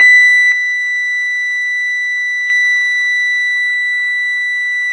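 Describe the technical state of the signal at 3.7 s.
At 3.7 s the music carries the same damage heard across the whole clip, with nothing above 10.6 kHz and a watery, swirling texture. This is likely MP3 compression at a very low rate, consistent with roughly 24 kbps. Starved of bits, the encoder removes the top band at a fixed cut-off and drops weak frequency lines that flicker between frames, producing metallic chirps on bright content and smeared attacks.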